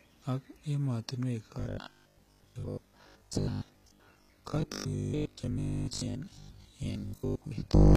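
From the start, the speech carries the marks of HE-AAC compression, likely at a low rate near 20 kbps. Nothing remains above 14.9 kHz, and the treble that does sound bright is rebuilt from copied lower bands rather than coded directly, so sibilants come out gritty and metallic, with harmonics that don't line up across the crossover. Unlike plain low-pass loss, the top stays present but has a synthetic, lispy sheen that is plainly audible.

From 1.59 s, right after "ak emotinywek", to 7.95 s, the speech turns into robotic sound from repeated short buffers, likely because fresh audio stopped arriving often enough and the player kept re-sending its last chunk. Roughly two thirds or more of the audio is repeats. Looping every 20 ms stamps a rigid 50 Hz buzz onto the sound, which still loosely follows the syllables. That locked pitch and metallic drone separate it from ordinary dropouts or codec warble.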